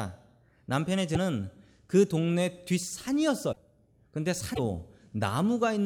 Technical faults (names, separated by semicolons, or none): broken MP3 bit reservoir